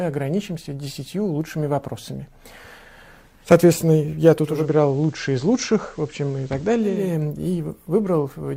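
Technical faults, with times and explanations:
2.08 s, bit error spike: a single sample had one bit flipped, jumping by a power of two and straight back, heard as one sharp broadband tick.
4.41 to 7.13 s, digital radio blending to analogue: the sound cross-fades over 0.32 s to the FM broadcast, dropping about 1 dB and adding faint hiss, then blends back.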